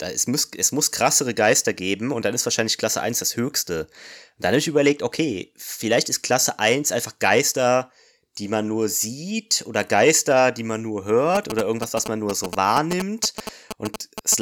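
From 11.35 to 14.34 s, GSM signalling bursts from a nearby 2G phone are rectified by the audio circuit, producing a galloping dit-dit-dit of short 217 Hz buzzes only slightly below the speech.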